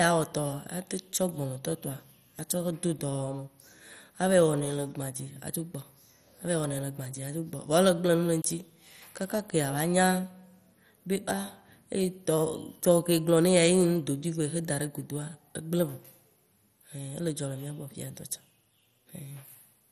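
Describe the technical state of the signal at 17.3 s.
At 17.3 s the speech carries the same damage heard throughout the clip: a dull, band-limited sound with nothing above 15.2 kHz and a gurgling, granular roughness. The likely cause is heavy MP2 compression at a low bitrate, around 56 kbps. Too few bits force the coder to switch upper sub-bands off and quantise the rest coarsely. Unlike a clean low-pass filter, the top flickers in and out with a grainy texture rather than simply fading away.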